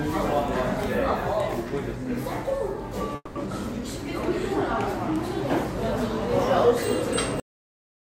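A long network dropout, most likely, runs from 3.15 to 3.37 s. The sound does not simply stop. For about 200 ms the last sound is stretched into a fading buzz, then roughly 30 ms of silence follows before normal audio resumes. The receiver was covering a gap with a synthetic continuation because incoming audio had stopped arriving. When playback picks up again it jumps ahead, and the 200 ms that never arrived are lost rather than delayed.

A cut-off end occurs at 7.40 s, where the audio halts abruptly mid-sound and drops straight to digital silence for the remaining stretch of the clip. Nothing decays or tails away. The signal is simply gone, as if the final buffers were never written out to the file or the output. An edge this hard can produce a small click at the point of the cut.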